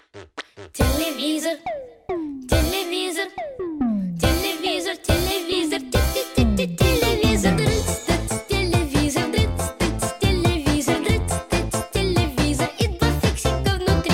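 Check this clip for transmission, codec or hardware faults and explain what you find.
Nothing here points to a transmission, codec or hardware problem; the audio holds steady all the way, with no dropouts, glitches or damage to report.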